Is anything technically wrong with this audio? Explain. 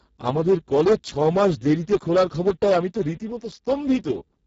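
Yes, there are two problems, and both last the whole speech clip.

Hard clipping runs from start to finish. The signal reaches the limit of some stage about 12 dB too hot, so the waveform peaks are sliced flat, with somewhere around one sample in twenty pinned at the ceiling. Those squared-off tops generate a spray of high harmonics that were never in the voice. Because the overload is this large, it is heard as a harsh, gritty fuzz on every loud syllable rather than an occasional crackle.

Speex codec damage is also present throughout, and it is heavy. Speex models speech with a predictive CELP scheme. The degradation here points to a very low quality setting, roughly 6 kbps, which leaves almost no bits for the excitation signal driving that model. The result is a hoarse, noisy voice. Nothing is present above about 7.7 kHz, and the upper band that does exist carries only a smeared, noise-like fill rather than real detail.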